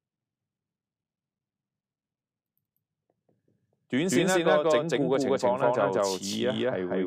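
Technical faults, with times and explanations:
Throughout, doubled audio track: a second full-band copy of equal level trails by about a fifth of a second, likely from a duplicate capture path, giving a dry, flat echo.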